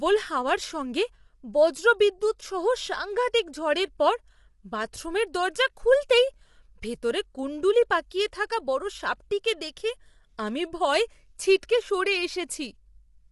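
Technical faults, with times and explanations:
Throughout: low-delay AAC compression, with plainly audible damage. The speech sounds rough and grainy, with a noisy haze filling the gaps between pitch harmonics, and nothing is present above 11.6 kHz. The likely cause is AAC-ELD at a bitrate that fits about 32 kbps. At this low bitrate its frames are quantized too coarsely to keep the gaps between harmonics clean. Unlike longer-frame codecs, which smear into pre-echo or swirling tones, this damage stays tied to the voice as constant graininess.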